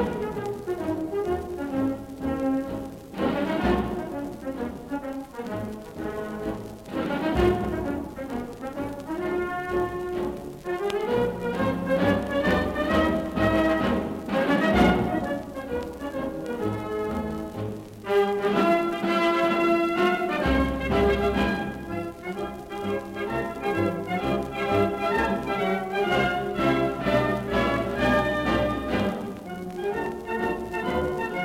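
Four sharp single clicks at 12.51, 17.11, 27.77 and 30.06 s, likely dropped samples: a fraction of a millisecond goes missing, so the waveform jumps.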